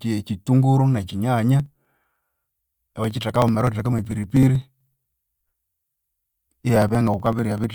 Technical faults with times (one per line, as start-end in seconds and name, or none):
1.60-7.64 periodic USB or driver dropouts